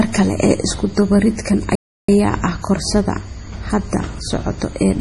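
Throughout, the bits were likely too few for MP3 compression, which fits a 32 kbps encode, and the speech sounds watery and swirly. From 1.75 to 2.09 s, a playback stall, likely from the player running out of data, cuts the speech to silence for 330 ms mid-flow.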